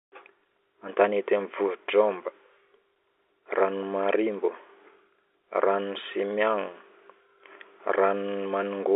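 No technical faults occur at any point in the speech, so there is nothing to place in time order.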